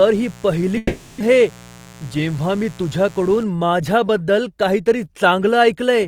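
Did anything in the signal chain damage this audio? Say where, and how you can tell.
Yes. From the start to 3.44 s a steady, raspy 60 Hz buzz sits about 25 dB below the speech. This is mains buzz picked up in the analogue wiring: a dimmer, rectifier or poor shielding injects sharp spikes twice per cycle, spraying harmonics up into the kilohertz range.

Between 0.77 and 1.22 s the speech gives way to a smeared continuation of the last sound that fades over roughly 430 ms, then resumes with about 400 ms of material missing. This is likely a long network dropout, where the receiver concealed lost packets before recovering.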